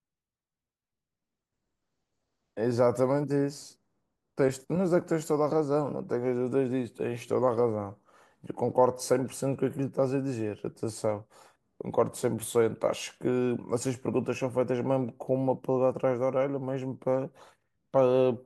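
Nothing in this speech recording stands out as a technical fault at any point, so there's nothing to flag here.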